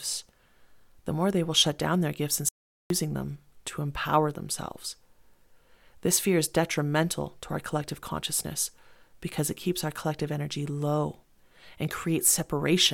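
At 2.49 s the speech cuts to dead digital silence for 0.42 s, an audio dropout to silence, likely a lost input link. Waveform and spectrogram show a flat, empty gap.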